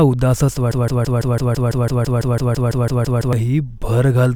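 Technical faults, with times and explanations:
0.71 to 3.33 s, broken-record loop: the speech suddenly catches on a fragment of about 0.17 s and stutters it back to back, identical each time, for 16 repeats, a mechanical rattling rhythm of roughly six cycles per second, before normal speech resumes. The likely cause is a stall in the player, encoder or stream, which kept re-sending the last short piece it held in place of new audio. Whatever should have been heard across those 2.6 seconds is lost.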